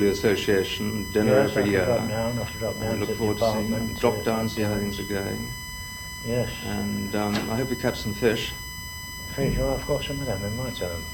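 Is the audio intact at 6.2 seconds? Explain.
No. USB whine runs throughout, including 6.2 s. A fixed 1 kHz tone, strongest at 2 kHz, sits about 10 dB below the sound. USB's 1 ms frames leak through power or ground.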